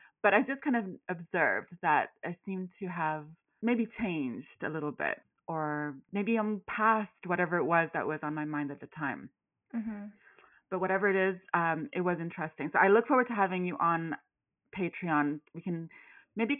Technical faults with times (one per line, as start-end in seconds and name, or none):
none